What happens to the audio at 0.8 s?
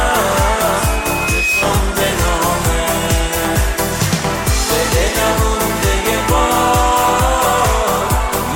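A microphone is picking up the loudspeaker it feeds, and at 2.5 kHz the loop gain climbs above one, so the system breaks into loudspeaker feedback squeal from 0.78 s to 1.66 s. That single frequency recirculates and reinforces itself, swelling over roughly 0.7 s into a piercing, steady tone that ends up about as loud as the rest of the sound before it cuts off at 1.66 s.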